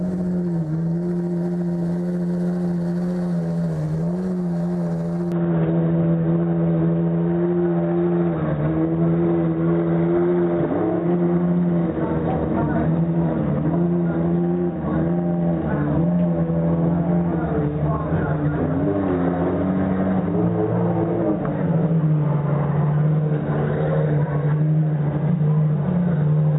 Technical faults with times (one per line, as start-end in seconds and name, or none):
5.32-26.58 input switched to a poorer device